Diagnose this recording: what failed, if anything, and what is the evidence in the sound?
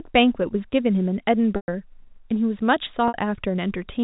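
Network fault: packet loss with pitch repetition. At 1.56 s (120 ms) and 3.08 s (60 ms), a repeated pitch period gives a held, fading buzz.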